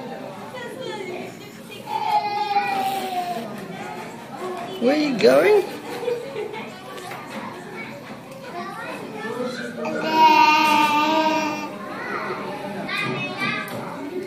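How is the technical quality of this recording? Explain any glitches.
The recording has one clear glitch, a doubled audio track. From 9.90 to 12.88 s, everything is followed by a slightly quieter copy, roughly 150 ms late and about 5 dB down, dry and full-band, cutting in and out abruptly. This is likely a second, slower capture path or an edit leaving two copies out of step.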